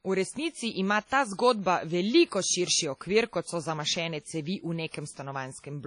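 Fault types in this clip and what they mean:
WMA compression: The speech carries a ringing, washy quality with hiss that swells and fades alongside the voice. This likely comes from a Windows Media Audio transform encoder at a low bitrate around 32 kbps. On a spectrogram, everything above 10.1 kHz is empty, and weak detail appears patchy.
Pre-echo: Short hiss arrives just ahead of three sharp onsets, at 1.06–1.10 s, 2.96–3.01 s and 4.89–4.94 s, spreading about 45, 53 and 47 ms before each attack. The waveform shows low-level noise before each onset, and the spectrogram shows a broadband smear ahead of it.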